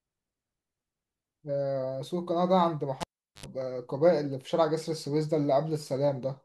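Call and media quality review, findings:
Cable pulled and plugged in, 3.01 to 3.46 s. Speech cuts with a pop. Near silence for about 0.40 s. Then 80 ms of 50 Hz mains buzz, with only the plug tip making contact. Second pop as the signal returns. Probable component: input cable or jack on the capture side.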